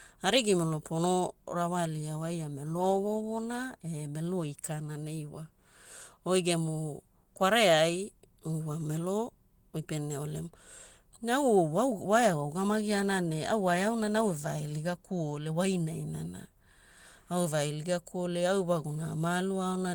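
No technical faults can be heard anywhere in the recording. The Opus voice compression runs in its hybrid mode at around 20 kbps, keeping the full band up to about 20.1 kHz and leaving only light traces of coding on the speech.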